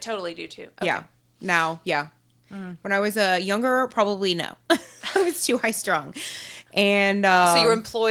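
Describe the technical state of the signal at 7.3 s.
At 7.3 s the audio is intact, with no fault at that moment beyond the light, steady character of the Opus voice coding that runs through the clip.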